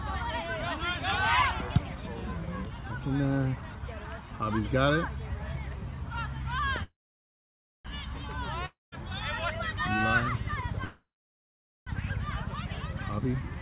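At 6.83 to 7.88 s and again at 10.84 to 11.90 s comes a call audio freeze: a fading buzz, then near-silence, likely from delayed packets. Sound resumes exactly where it paused, with nothing lost. At 8.66 to 8.95 s, a long network dropout sounds similar but shorter, with 0.18 s of silence. Here about 0.27 s of sound never returns, so the audio jumps ahead. From 12.98 to 13.57 s, a jitter buffer speed-up plays the audio about 11% fast at unchanged pitch, trimming roughly 70 ms. This is hurried pacing rather than a gap. Throughout, nothing is heard above 4 kHz, which fits a G.711 A-law call path at 64 kbps.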